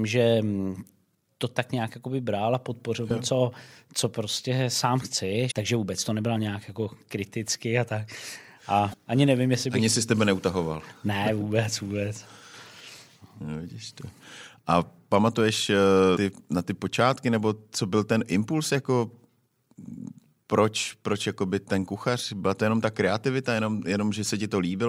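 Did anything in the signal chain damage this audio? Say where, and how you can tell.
Yes. Damaged data in a compressed stream causes brief disruptions in this speech at 3.07–3.12 s, 5.47–5.52 s, 8.90–8.94 s and 16.13–16.17 s, each lasting about 40 ms. The fault sits at the codec or storage stage. Corrupted bytes in the encoded stream made the decoder misread those frames and lose sync, producing a short disruption until it locked onto the next valid frame header.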